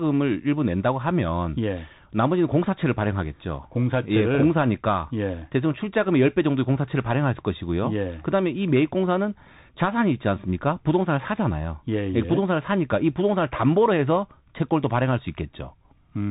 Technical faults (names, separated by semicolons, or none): Bluetooth CVSD headset codec